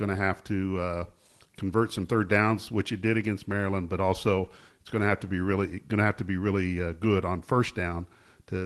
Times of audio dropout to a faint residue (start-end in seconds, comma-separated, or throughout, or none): none